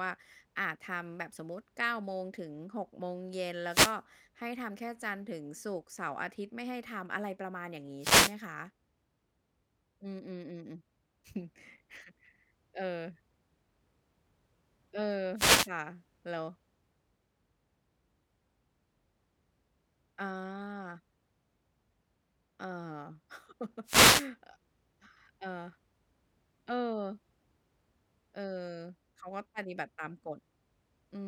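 Four wireless microphone noise hits break into the speech, at 3.66 to 4.00 s, 7.99 to 8.36 s, 15.35 to 15.69 s and 23.84 to 24.30 s, each lasting about a third to half a second. The FM radio link fades as reflected paths cancel the carrier, so receiver hiss surges as a swishing burst of static. A spectrogram shows each as a broadband vertical smear over the speech harmonics, and the waveform shows dense noise filling the envelope.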